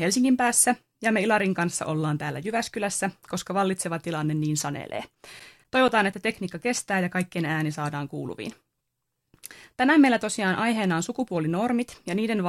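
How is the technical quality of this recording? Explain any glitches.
The recording has one glitch, a short run of CD scratch ticks in the speech. Between 4.67 and 6.61 s, nine ticks repeat roughly five times a second, none longer than about 10 ms. A blemish passing once per disc turn defeats error correction, so the player patches or mutes those samples. The waveform shows evenly spaced notches, and the spectrogram shows thin vertical stripes.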